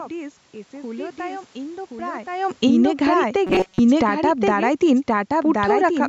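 From the start, the speech carries a doubled audio track: a second, full-band copy trails the original by about a second, roughly 5 dB quieter, with no decay or room colour to set it apart. The likely cause is the same signal being captured twice, once through a slower path. On a waveform, each syllable reappears about a second later at a lower amplitude. On a spectrogram, every harmonic pattern is repeated as a fainter, identically shaped block shifted along the time axis.

From 2.48 s to 6.03 s, automatic gain falling pulls the whole signal down by about 11 dB. The gain control judged the input too loud and backed off steadily, so speech and background sink together. This is different from the talker shifting position at around 2.5 s, which changes only the voice. The waveform envelope tapers smoothly over those three and a half seconds, and the spectrogram darkens evenly across all frequencies, including the noise floor between phrases.

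Overlapping this, automatic gain rising from 3.0 s to 4.93 s lifts the level by about 3 dB. The control briefly read the input as too quiet and pushed back against the downward trend, so voice and room noise swell together for under two seconds. In the waveform this appears as a shallow bulge in the decaying envelope. On the spectrogram, the whole band, background included, brightens slightly and then fades again.

Between 3.47 s and 3.80 s, there is robotic sound from repeated short buffers. Audio arrived too rarely, and the gaps were likely filled by looping the last few milliseconds while most of the real signal, roughly two thirds, was skipped. The loop imposes a rigid 188 Hz metallic buzz, which fits a repeat length of about 5.3 ms. The waveform shows an identical short cycle tiled over and over. On the spectrogram, evenly spaced flat horizontal lines at multiples of 188 Hz replace the natural, moving harmonics.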